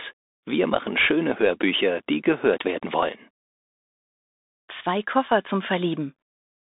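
Throughout, the Bluetooth CVSD headset codec confines the speech to roughly 250 Hz to 3.7 kHz, with nothing above 3.8 kHz. Its coarse one-bit slope tracking, consistent with a 64 kbps link, leaves s sounds scratchy over a granular hiss.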